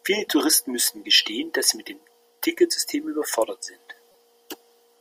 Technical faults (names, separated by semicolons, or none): damaged data in a compressed stream